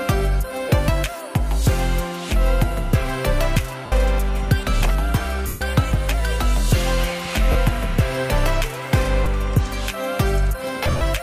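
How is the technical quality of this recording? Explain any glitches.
The recording is marred by repeated dropouts from lost LE Audio frames, at 0.69, 2.29, 3.86, 5.47 (140 ms), 7.52, 9.24 and 10.83 s (scattered over 180 ms). The LC3 decoder refills gaps with the previous spectrum under random signs, so tones smear into noise, and longer gaps fade toward silence.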